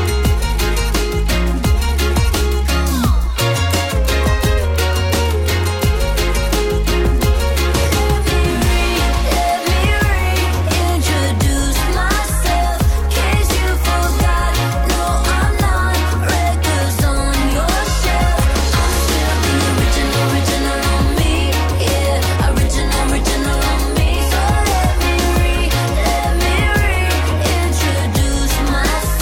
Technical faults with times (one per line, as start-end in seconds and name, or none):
none